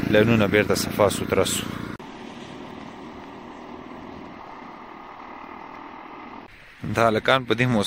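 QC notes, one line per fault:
4.31 s, lost LE Audio frames: there's a very brief patch, about 15 ms, where the sound goes grainy and smeared instead of clean. Looks like the Bluetooth link dropped a couple of frames, which fits two 7.5 ms LC3 frames. The decoder papers over the gap by replaying the last good spectrum with its phases scrambled, so any tonal content turns into a short noisy wash before the real signal picks up again.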